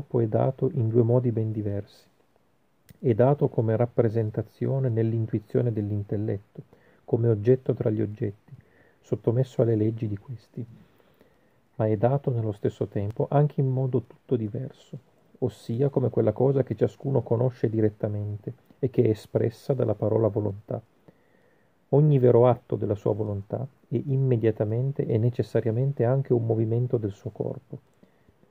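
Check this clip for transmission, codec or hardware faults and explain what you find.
Nothing in the signal points to a transmission, codec or hardware problem.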